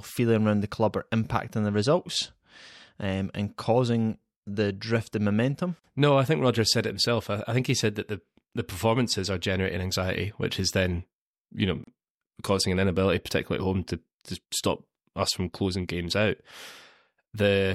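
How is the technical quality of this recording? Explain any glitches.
The speech is interrupted twice by short dropouts. A gap at a join of encoded pieces falls at 5.79 s, after "the drift in momentum", lasting 46 ms, and again at 11.84 s, after "which is then you", lasting 34 ms, roughly six seconds apart. Separately encoded segments were spliced untrimmed, leaving encoder delay and end padding as abrupt silences with smeared edges before the speech resumes where it stopped.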